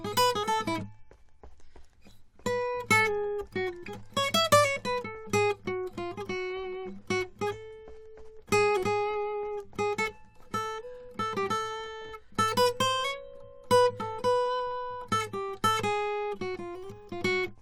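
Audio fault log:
No faults detected; the music runs continuously with nothing to log.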